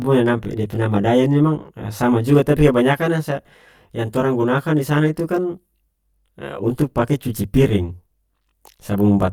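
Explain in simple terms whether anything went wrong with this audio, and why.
One side of the stereo signal arrived late, by roughly 20 milliseconds, and the two sides were then mixed into a single channel. This is channel delay, which causes comb filtering. When the late copy meets the on-time copy, certain pitches cancel out at regular steps, starting as low as a few dozen hertz. That gives the speech a rough, slightly doubled quality, and it lasts from start to finish.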